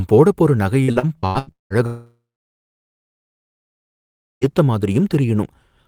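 Right after "போடப் போற நகை", from 0.83 to 1.73 s, the speech turns choppy, with a robotic quality and bits clipped out. The longest hole is about 0.19 s. This is repeated packet loss. Audio kept failing to arrive, and each gap was patched by stretching the preceding sound, so more than half of this stretch is filled-in sound.

At 1.86 s the speech cuts off into a brief fading buzz or hiss, then roughly 2.2 s of silence, resuming at 4.53 s with about 2.56 s of audio simply gone. The likely cause is a long network dropout: the receiver extended the last sound briefly, then had nothing to play.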